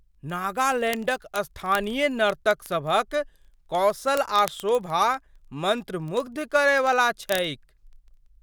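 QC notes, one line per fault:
0.12–8.41 s, word clock ticks: steady train of sharp clicks of uneven strength, roughly every 30 ms, a few hundred in all. The receiving device is free-running, not locked to the sender's clock, with a mismatch of around 700 ppm, so one sample is dropped or repeated at each slip.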